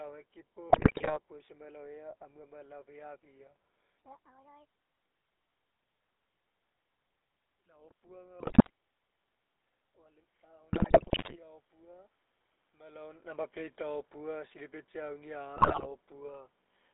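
The GSM full-rate codec colours the whole clip. The speech sits in a narrow phone band, roughly 300 Hz to 3.6 kHz, and has that buzzy, gravelly edge you get when the vocal tract is modelled and then driven by a sparse, regularly spaced pulse train instead of the real excitation. The roughness is plainly audible throughout, and the overall character fits a 13 kbps full-rate link.

The first burst of GSM bit errors comes between 0.7 and 1.18 s. Corrupted bits are landing in the decoder's parameters, so for 19 frames the spectral shape, pitch or gain comes out wrong. You hear it as a short stretch of squawking and gargling, with the odd pop where a gain value jumps. The same thing happens again from 8.4 to 8.7 s. That one is brief.

From 9.94 to 12.2 s there's automatic gain rising. The gain control decided the input was too quiet and pushed its gain up by about 5 dB over a couple of seconds. 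The voice and the room noise swell together, which is how you can tell it's the AGC and not the talker. A third patch of bit errors, from 10.72 to 11.37 s, sits right inside that rise, so the garbling gets louder as it goes. The level change around 12.5 s is just the talker moving, like the one near 4 s.

Automatic gain falling runs from 13.27 to 16.41 s. The control judged the signal too loud, or too noisy for the gain it started with, and eased its gain down by about 4 dB. The sound starts full and then sinks gradually, with the background dropping along with it. The last GSM bit errors, from 15.56 to 15.87 s, land during that fade as another short burst of gargling and popping.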